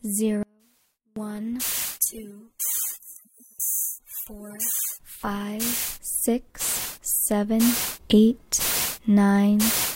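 At 0.43 s the sound drops out abruptly and returns at 1.16 s, a gap of about 0.73 s. This is an audio dropout to a faint residue. The gap holds only a faint leak, roughly 35 dB down. The likely cause is a brief signal loss on a still-live path.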